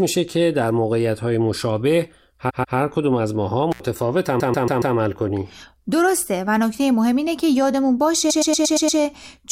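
Runs of compressed frames were repeated in the stream at three points, so the decoder replays the same slice of speech. From 2.49 to 2.77 s a 139 ms block plays twice more, adding 0.28 s. From 4.39 to 4.95 s a 139 ms block plays four more times, adding 0.56 s. From 8.29 to 8.99 s a 116 ms block plays six more times, adding 0.70 s. Each is heard as a stutter. Between the first two stutters, an intermittent contact opens the line for 75 ms at 3.72 to 3.80 s, leaving a brief cut-out with crackle at its edges.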